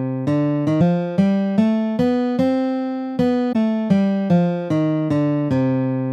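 Around 0.77 s, and again around 3.52 s, you get a quick glitch lasting roughly 40 ms each time. That's damaged data in the compressed stream: some of the data in there is wrong, so the decoder misreads those frames, loses its place, and has to hunt for the next valid frame header before it can pick the sound back up. The stretch it garbles while resyncing comes out as that brief glitch.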